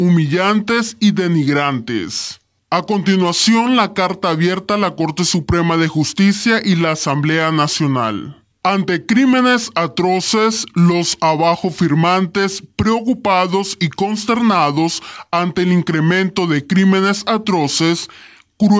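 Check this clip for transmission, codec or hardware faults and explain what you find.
One fault runs through the whole clip: a wrong sample rate. Everything plays at about 0.73 times its proper speed. Pitch drops by about 5.5 semitones along with it. That matches material recorded at 22 kHz but played back at 16 kHz with no conversion. The samples are intact, just clocked out too slowly. So time stretches and frequencies fall by the same ratio. The sound comes across low, heavy and sluggish from start to end.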